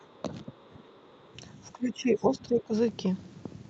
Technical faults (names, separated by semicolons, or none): speech suppressed in double talk; other side's voice leaking through